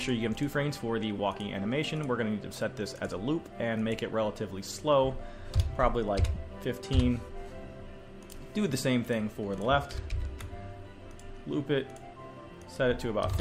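At 1.18 s and again from 6.34 to 6.37 s, lost LE Audio frames leave a brief noisy smear where the decoder repeats the last spectrum with random signs. This is not a hard dropout to silence.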